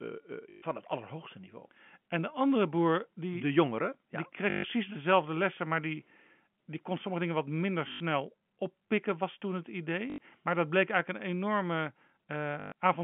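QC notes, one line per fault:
0.50–0.62 s: packet loss with last packet repeated, 120 ms, just before "het allerhoogste niveau". The repeated 20 ms segment buzzes robotically at about 50 Hz.
4.50–4.64 s: packet loss with last packet repeated, 140 ms. Looped segments give a 50 Hz buzzy stutter that fits 20 ms packets.
7.92–8.00 s: packet loss with last packet repeated, 80 ms, between "sommige dingen wat minder" and "oppikken was toen het". A short repeated-segment stutter.
10.10–10.18 s: packet loss with last packet repeated, 80 ms, just after "oppikken was toen het". The brief looped segment gives a buzzy glitch at the packet rate.
12.60–12.72 s: packet loss with last packet repeated, 140 ms scattered over 160 ms, longest run 120 ms. Repeats buzz at about 50 Hz through the band-limited telephone sound.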